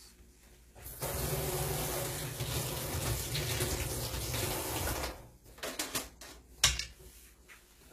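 A recording of everyday sounds whose treble sounds gritty and metallic throughout, with plainly audible codec damage and nothing above 14.9 kHz. This is likely HE-AAC compression, which rebuilds the top band by copying lower bands upward; the harshness fits a bitrate near 20 kbps.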